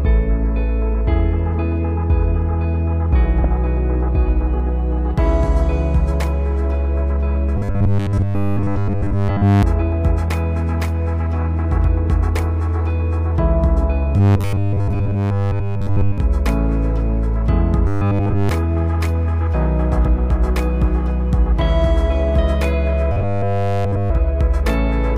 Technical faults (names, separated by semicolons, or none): damaged data in a compressed stream; robotic sound from repeated short buffers